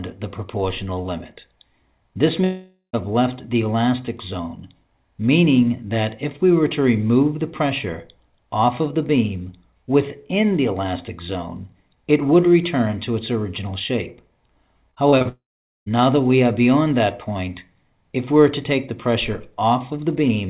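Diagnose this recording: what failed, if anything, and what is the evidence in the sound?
Long network dropout at 2.44–2.95 s and 15.29–15.88 s: sound fades into silence, then resumes with about 0.5 s and 0.58 s missing, likely from network loss.

Repeated packet loss (robotic sound) at 14.91–15.27 s: five network gaps, longest 24 ms, each patched by continued sound, giving choppy, robotic audio with about 27% concealed.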